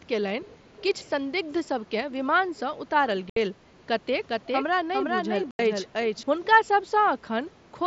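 From 0.43 to 0.57 s and again from 0.76 to 1.09 s, a faint delayed copy of the speech sits roughly 25 dB below it, trailing by about 0.50 s and 0.53 s. This is an echo leak, likely from a far-end loudspeaker whose echo canceller let part of the returned signal through.

At 3.30 s there is a 67.5 ms hole with hard edges, and at 5.51 s an 82.5 ms hole. These are unconcealed Bluetooth headset packet loss: runs of short headset frames went missing and silence replaced them. The lengths fit roughly nine and eleven lost frames.

From 4.29 to 6.23 s the speech carries a doubled audio track. A second full-band copy runs about 400 ms behind, around 5 dB quieter, with no decay or room colour, and it starts and stops abruptly. This is likely a second capture path or an edit that holds two misaligned copies. The 5.51 s dropout falls inside this stretch. Underneath, the mSBC link's 8 kHz bandwidth and light graininess are audible.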